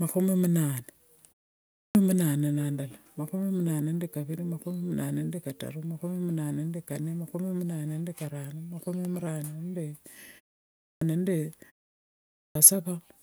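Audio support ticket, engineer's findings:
Clipped start after a pause, three occurrences. Output device drops into a sleep state during short silences and is still waking or relocking when speech resumes. The first part of the sound after each pause is swallowed, so speech starts abruptly. Hits at 1.69–1.95 s (about 260 ms lost, 0.44 s pause before), 10.75–11.01 s (about 264 ms lost, 0.43 s pause), 12.25–12.55 s (about 303 ms lost, 0.62 s pause).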